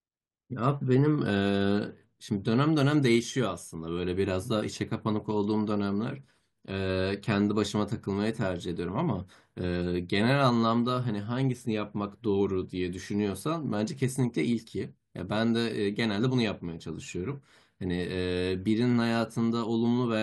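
Speech recording with no audible technical fault anywhere in the clip.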